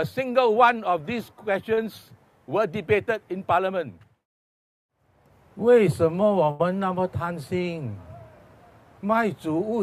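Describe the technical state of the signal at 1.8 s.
Short concealed packet loss runs from 1.73 to 1.79 s. About 40 ms of the stream arrived too late to decode, so the receiver filled roughly 36 ms by extending the preceding sound and then blended back into real audio, leaving a brief smear or wobble.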